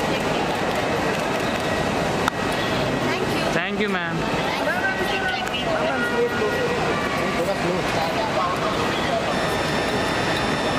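A high, steady whistle enters at 9.31 s and runs to the end of the audio at 10.78 s, wavering only slightly near 1.79 kHz and sitting roughly 10 dB below the signal. This switching supply whistle comes from a switching power supply running in an audible burst mode or beating against another supply.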